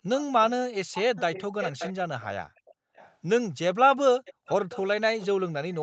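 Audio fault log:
0.18–0.45 s, 0.93–3.15 s, 4.25–4.82 s, 5.18–5.27 s: echo leak. A quieter delayed copy of the speech trails the original by 467 ms at first, then 533 ms. It is strongest in the long middle stretch and faintest at the end. This is likely loudspeaker pickup that an echo canceller failed to remove fully.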